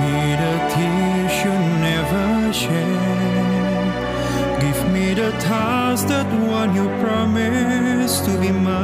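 No dropouts, clipping, glitches or other transport or processing faults turn up anywhere in the recording.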